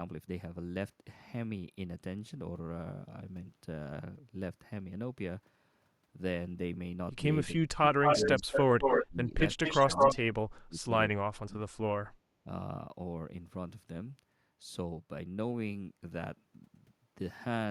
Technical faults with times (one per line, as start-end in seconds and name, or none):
7.53-8.47 speech suppressed in double talk
8.03-9.06 echo leak
9.01-9.35 speech suppressed in double talk
9.39-10.15 echo leak
9.78-10.86 speech suppressed in double talk
11.21-11.79 speech suppressed in double talk